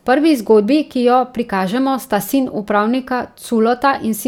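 No technical faults can be heard anywhere in the speech recording; the signal stays continuous and intact throughout.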